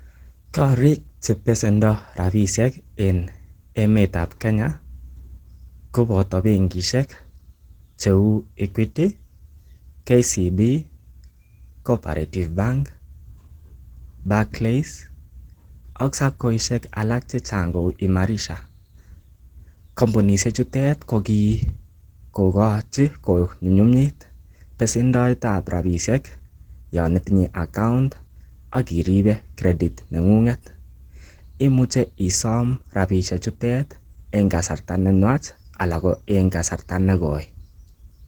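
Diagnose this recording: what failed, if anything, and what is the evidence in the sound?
The codec stage is at fault: the speech was squeezed through a low-rate encoder, most likely Opus compression in its hybrid speech mode, and the damage is plainly audible across the whole clip. The voice sounds muffled and hoarse, with a rough, grainy texture where detail has been replaced by filled-in noise. Bandwidth stays wide, with content reaching about 20 kHz, so the coarseness comes from starved bits rather than filtering, which fits a rate near 16 kbps.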